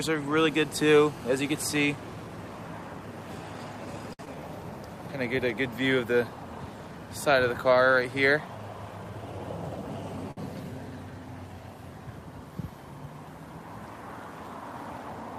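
A hard, raspy buzz with a dense stack of harmonics sits under the audio from 0.38 to 1.85 s, nearly steady at about 21 dB below the signal. Its fundamental near 217 Hz marks it as GSM phone buzz: a nearby 2G handset on a call transmits in bursts at that rate, and the audio circuitry rectifies the radio pulses into sound. At 4.13 to 4.21 s the sound hangs for 57 ms and then resumes exactly where it left off, with nothing lost. This is a short stall from a late packet: the jitter buffer ran dry, so the receiver stretched the last sound until the packet showed up, adding that much delay. The same 57 ms hold recurs at 10.31 to 10.39 s. Just after the first stall, between 4.25 and 4.41 s, there is a brief smear where about 20 ms of audio is gone, bridged by a synthetic continuation of the preceding sound. That is short concealed packet loss: those packets never reached the decoder in time, and the gap was papered over before blending back into real audio. 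From 9.04 to 9.46 s the audio runs hurried at 115% speed with unchanged pitch. This is a jitter buffer speed-up: with excess audio queued, the receiver repeatedly cut pitch-period-sized slices, roughly 70 ms in total, to bring the delay back down.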